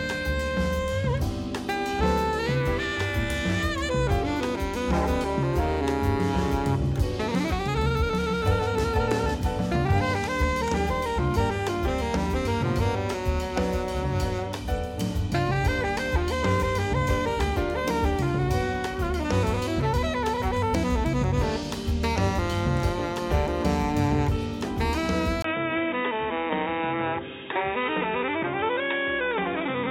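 At 25.42 s a brief gap of about 20 ms interrupts the audio, and from there to the end the sound turns dull and boxy, with nothing above 3.8 kHz. The level stays essentially the same, but a new, faint background noise sits far below the signal, roughly 55 dB down. This pattern points to the input switched to a poorer device, likely a narrower-band microphone or a headset's call profile taking over mid-recording.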